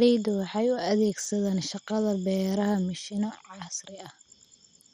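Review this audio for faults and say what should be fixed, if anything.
Throughout the speech, the likely cause is MP2 compression at too low a bitrate, which fits a rate around 56 kbps, so upper sub-bands drop in and out. Nothing sounds above 15.3 kHz, and the remaining bands carry a dull, gurgling, granular distortion. To prevent it, export from the original source at a higher bitrate or with a more efficient codec.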